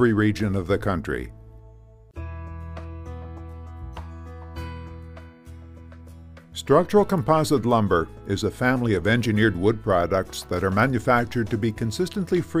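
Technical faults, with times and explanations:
7.18 s, electrical switching spike: a single sharp snap, a few milliseconds long and peaking around -30 dBFS, sits on top of the sound, most likely a nearby switch or static discharge arcing into the line. Unlike a dropout click, nothing underneath is lost or interrupted.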